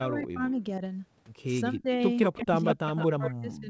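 From 0 to 0.61 s and again from 1.72 to 1.99 s the speech dips by up to about 25 dB, the pattern of speech suppressed in double talk, likely an echo canceller turning down the near talker while the far side also speaks. At 2.24 to 2.42 s an echo leak appears: a copy of the speech trailing 182 ms behind, roughly 10 dB below it, probably residual loudspeaker pickup the canceller failed to remove. From 2.42 s to the end, suppression deepens to about 40 dB. Within it, the 182 ms echo returns at 2.67 to 2.74 s, roughly 5 dB below the speech, and at 3.00 to 3.07 s, again roughly 10 dB down.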